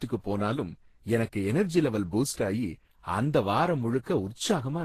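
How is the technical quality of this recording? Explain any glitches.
The recording has one fault that runs the whole length of the speech. Transcoding between lossy codecs is present throughout: nothing is left above 14.2 kHz, and two sets of coding artefacts sit on top of each other. This likely comes from a low-rate Opus encode, around 16 kbit/s, that was then re-encoded with Vorbis at a higher rate, around 34 kbit/s, with the second codec spending bits on the first one's damage.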